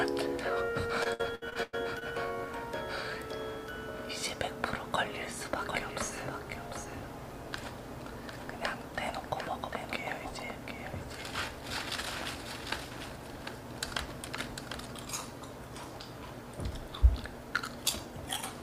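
From 1.03 to 2.03 s, repeated packet loss (robotic sound) chops the audio: about seven short holes, the longest 100 ms, are patched by stretching the preceding sound, so roughly 30% of that second is filled in. A spectrogram shows smeared, frozen harmonic stripes interrupting the normal texture.

Between 5.59 and 15.05 s a doubled audio track appears: a second full-band copy trails about 0.7 s behind, roughly 5 dB quieter, likely from a slower parallel capture path. On a waveform the echo starts and stops abruptly, with no decaying room tail.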